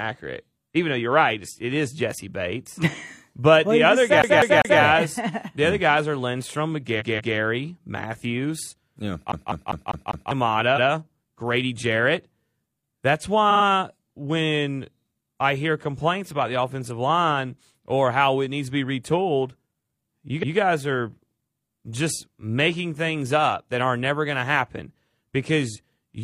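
At 4.22 to 4.82 s, just after "the other", the speech falls into a CD stuck on one turn. A scratched disc keeps throwing the laser back to the same point, so a 0.2 s loop plays three times, with a brief mute at each jump. The same fast, even stutter returns at 9.32 to 10.31 s, this time looping five times.

Repeated frames come in between and after. At 6.96 to 7.33 s, a 0.19 s block of compressed audio, which fits a run of four frames, was written twice more, so it plays again and the speech is stretched by 0.37 s. A 0.14 s block repeats once at 10.73 s. Just before "when I hear complaints", at 13.47 s, a 46 ms scrap plays three extra times as a quick stutter. At 20.39 s, just before "guys are", another 0.14 s block repeats once. Each repeat is a small jerk in the sound.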